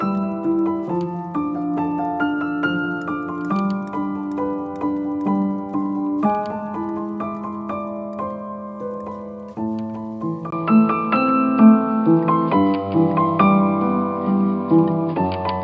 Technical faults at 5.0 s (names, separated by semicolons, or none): none